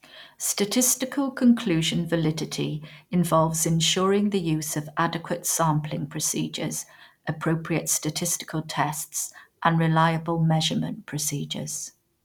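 No technical faults are audible in this recording.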